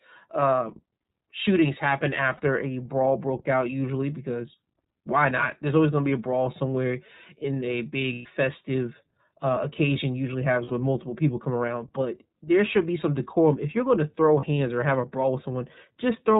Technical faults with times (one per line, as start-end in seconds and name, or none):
0.00-16.40 iLBC codec
2.37-2.40 lost iLBC frames
8.13-8.26 lost iLBC frames
10.65-10.72 lost iLBC frames
14.40-14.46 lost iLBC frames